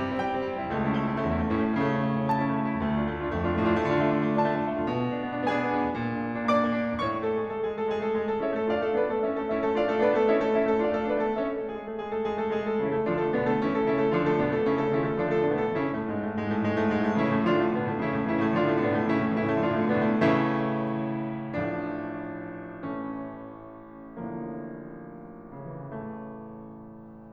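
No technical faults can be heard anywhere in this music clip. Nothing interrupts or alters the sound at any point.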